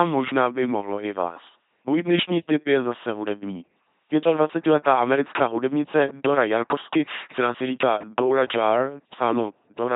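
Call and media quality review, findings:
LPC-10 vocoder, whole clip. Buzzy, robotic speech, heavy damage. Nothing above 3.8 kHz. Fits a 2.4 kbit/s coder. Small all-pole filter driven by pulses or noise. Voiced/unvoiced decision per moment.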